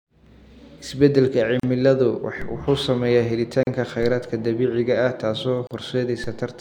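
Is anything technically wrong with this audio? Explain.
Yes. The speech has two faults.

Gaps at a join of encoded pieces occur at 1.60 to 1.63 s, 3.63 to 3.67 s and 5.67 to 5.71 s, each about 36 to 38 ms long and spaced 2.0 s apart. The audio appears to have been encoded in separate chunks and spliced without trimming, so each join keeps the encoder's start-up delay and final-frame padding. The speech stops briefly and then resumes where it left off, and the codec smears the edges. The strict 2-second spacing and the fact that no material is lost distinguish these from random network dropouts.

DC steps occur at 2.42 s, 4.03 s and 6.24 s. At each point the waveform's zero line suddenly jumps, as if an offset were switched in. The offset then drains away like a 2 Hz high-pass settling, so it does not stay fixed. Each step is heard as a low thump while the speech continues unchanged. This distinguishes it from a dropout, which would break up the speech.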